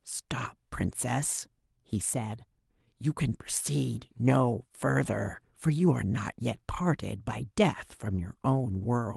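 No faults found in the speech; the top end rolls off around 12 kHz, which fits an Opus call path running at roughly 40 kbps.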